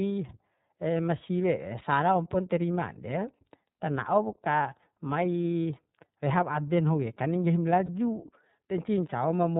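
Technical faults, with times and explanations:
Throughout, iLBC codec: speech is band-limited below 4 kHz, plainly rough and synthetic, with each 30 ms frame coded alone, which fits about 13.3 kbps.
7.86–7.89 s, lost iLBC frames: a 30 ms gap becomes a held, buzzy vowel from a repeated pitch cycle. The voice recovers at once.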